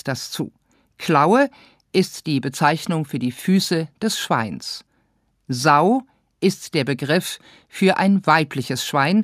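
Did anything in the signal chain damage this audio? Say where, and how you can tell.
No, nothing in the signal chain audibly damaged it.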